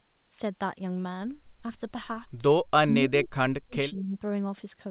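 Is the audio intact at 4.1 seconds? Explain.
No. From 3.91 to 4.17 s the speech dips by as much as about 15 dB, with roughly 150 ms of it affected. This is likely speech suppressed in double talk. The echo canceller could not tell the talker from returning loudspeaker echo, so it attenuated both. The call path's 4 kHz ceiling, which fits G.711 A-law at 64 kbps, is audible too.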